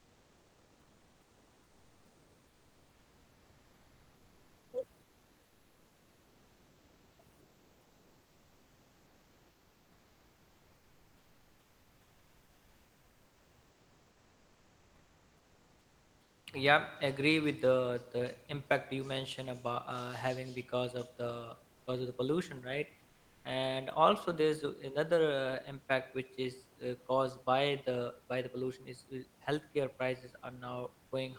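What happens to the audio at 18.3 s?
At 18.3 s the speech carries on intact, with nothing going wrong there; only the room noise sits in the background, about 33 dB below the speech.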